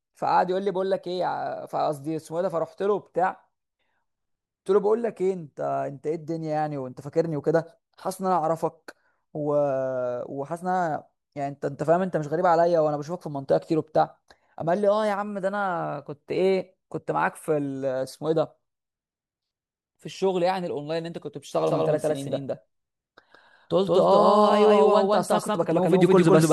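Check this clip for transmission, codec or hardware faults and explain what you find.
One fault: from 21.67 s to the end, a doubled audio track, likely from a slower second capture path, repeats the speech about 150 ms late at equal level, starting abruptly without the decay of an echo.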